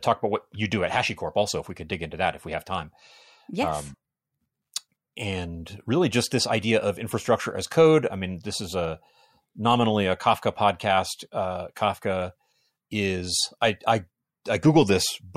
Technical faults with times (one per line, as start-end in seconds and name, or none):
none